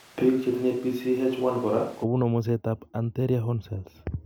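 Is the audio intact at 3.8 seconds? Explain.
Yes, the speech runs cleanly through 3.8 seconds, with no dropout, click, distortion or other fault at that point.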